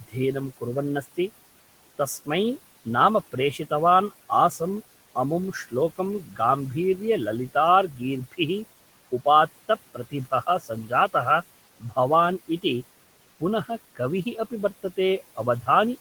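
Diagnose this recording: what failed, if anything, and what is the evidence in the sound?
Call processing failed. Noise suppressor artifacts run throughout. The room noise, about 19 dB under the speech, drops about 16 dB between phrases, then swells back under speech.

Speech is also cut by the noise suppressor. The suppressor took soft speech for noise and turned it down. Faint syllables dip about 12 to 17 dB at 0.08–1.18, 5.15–6.39, 7.54–8.39, 9.12–11.14, 11.8–12.64 and 13.39 s to the end.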